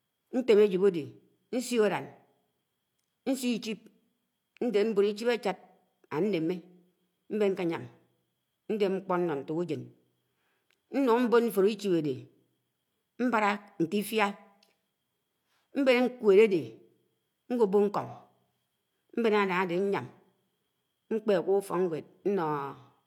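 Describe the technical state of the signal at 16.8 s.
Around 16.8 s the speech signal is intact, with no dropout, distortion, glitch or other audible fault at that point.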